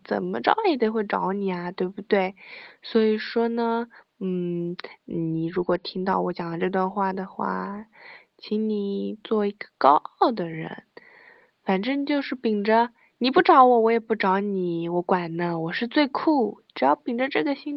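No technical faults in the signal chain; the only background is the room's own ambient noise, sitting about 49 dB below the speech.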